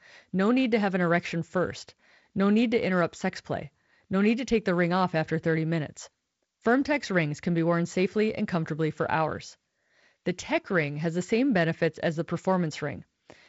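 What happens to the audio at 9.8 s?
At 9.8 s the audio is intact, with the speech carried through G.722 wideband telephone coding and nothing disrupting it at that moment.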